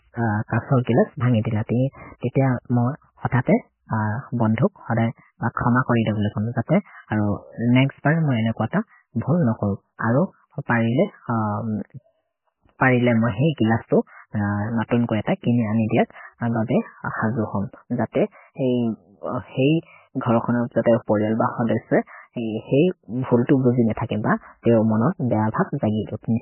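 From start to finish the speech sounds dull and watery, with nothing above 3 kHz and a swirly, chirping texture on the s sounds. That's likely MP3 compression at a very low bitrate, around 10 kbps, where the encoder chops the treble and drops weak detail frame by frame.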